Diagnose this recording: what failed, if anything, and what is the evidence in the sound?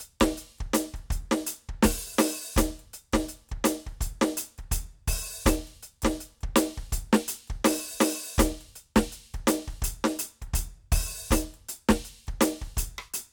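Nothing failed: the music gives no audible evidence of a fault at any stage of the chain.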